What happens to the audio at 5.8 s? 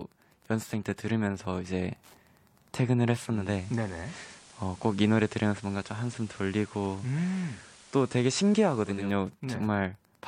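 Digital radio blending to analogue spans 3.27 to 9.15 s. The receiver lost the digital stream and cross-faded over 322 ms to the FM broadcast, so hiss sits about 25 dB below, and level drops about 1 dB. Wi-Fi interference runs throughout, including at 5.8 s. A nearby radio's beacon, rectified by the circuit, ticks every 102.4 ms, roughly 40 dB below the speech.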